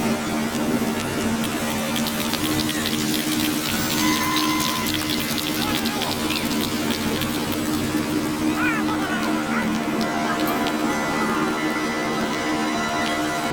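Planar audio read as interleaved, throughout: each 26.12 ms block plays twice at double speed, so the sound is an octave high with a flutter at 38.3 Hz.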